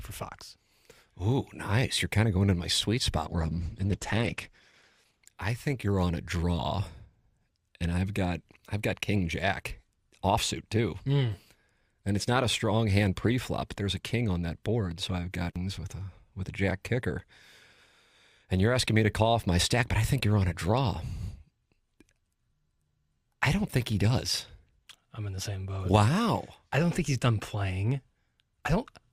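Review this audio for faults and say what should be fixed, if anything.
Adaptive stream at a lower bitrate, 3.26 to 5.26 s: the speech suddenly gets more codec artefacts, with no gap, then recovers. This fits the player switching from roughly 64 kbit/s Opus to about 12 kbit/s when throughput dipped. To prevent it, keep a larger playback buffer or a higher minimum bitrate rung so brief slowdowns don't force a low-quality switch.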